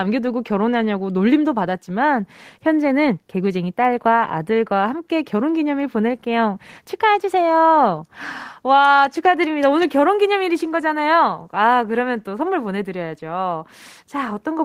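Nothing in this speech recording stood out as a technical fault on listening.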